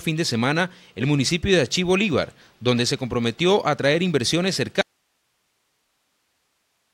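At 4.81 s the sound cuts out abruptly and never returns. This is an audio dropout to a faint residue. Only hiss remains, roughly 50 dB below the signal. The wanted signal was likely lost upstream while the path after the break stayed live.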